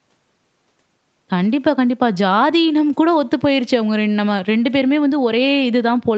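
No technical faults occur anywhere in this speech, which carries the call path's normal band limit with nothing above about 8 kHz.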